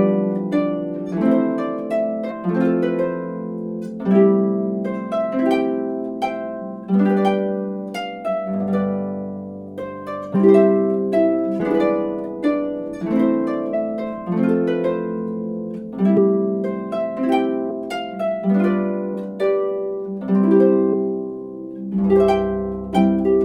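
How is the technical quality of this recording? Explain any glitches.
Seven brief smeared blips interrupt the recording, each a sudden forward jump in the sound, at 2.30, 10.34, 11.59, 13.73, 16.16, 17.70 and 20.92 s. These are compressed frames skipped: whole blocks of encoded audio were missing or rejected as damaged, so playback leaps ahead. The first jump loses about 50 ms, most lose about 100 ms, and the one at 13.73 s about 150 ms, consistent with frames of roughly 23 ms. Overlapping frames soften each join into a smear, not a click.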